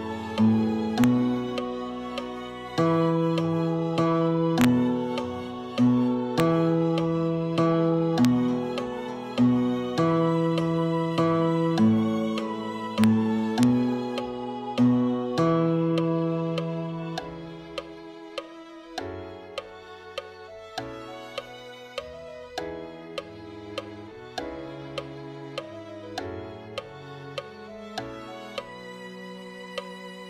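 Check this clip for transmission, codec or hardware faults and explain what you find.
The clip has a digital fault: integer overflow, heard as six sharp cracks at 1.04 s, 4.61 to 4.65 s, 6.40 s, 8.25 s, 13.04 s and 13.63 s. At these peaks the signal reaches or barely passes full scale, by about 1 dB at most. Instead of being held at the limit, the sample values wrap around to the opposite sign. On the waveform, each peak jumps from one rail straight to the other. On a spectrogram, each event is a thin full-band vertical line. The cracks are harsher than ordinary clipping.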